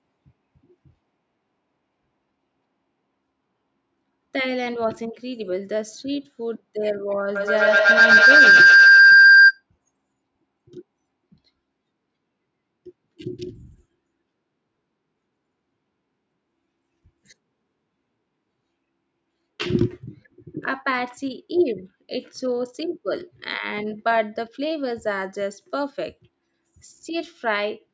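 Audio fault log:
7.36–9.63 s, feedback howl: a second device in the same room picks up the call's output, so each pass from microphone to loudspeaker and back returns louder. The repeats narrow onto a tone around 1.5 kHz, come back about every tenth of a second with the loop's delay, and climb to about 13 dB above the speech. Unlike an echo, the repeats grow rather than fade. Unlike a steady interference tone, the howl swells and stops when the loop breaks.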